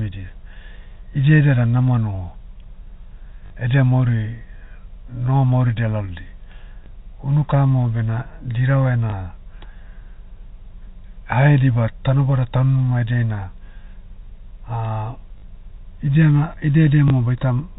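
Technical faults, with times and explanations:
3.46–3.50, 6.84–6.86, 9.10–9.12, 15.38–15.42 and 17.08–17.10 s: packet loss with last packet repeated. Gaps of 20 or 40 ms, which fits 20 ms packets, are filled by replaying the preceding sound rather than silence. The single repeats give a small blip and the two-packet runs a brief robotic stutter instead of a dropout.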